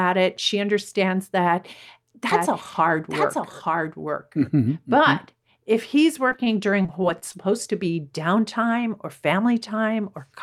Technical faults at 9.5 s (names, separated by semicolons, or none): none